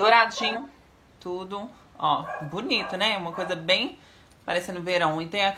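At 0.51 s, lasting until 0.57 s, there is a short burst of damaged data in a compressed stream. For roughly 60 ms the encoded bitstream carries corrupted bytes, so the decoder cannot parse the frames in that stretch correctly. It loses frame sync and has to hunt for the next valid header before decoding resumes. The result is a brief chirp or blip that breaks abruptly into the audio and stops just as suddenly.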